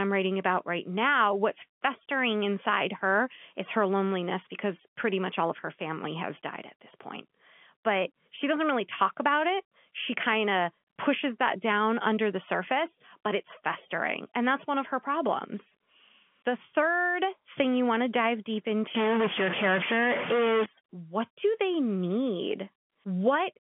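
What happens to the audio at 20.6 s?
At 20.6 s you're right at the tail of a burst of distortion that runs from about 18.95 s to 20.66 s, which has the signature of a stuck bit. The likely cause is one data bit jammed at 0 or 1, so roughly half the sample values land off by that bit's weight, in a pattern set by the waveform. Small values flip around zero, so quiet gaps fill with noise rather than staying silent. The telephone band stays narrow throughout.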